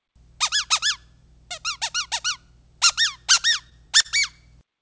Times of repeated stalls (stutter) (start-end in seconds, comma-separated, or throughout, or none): 3.36-4.06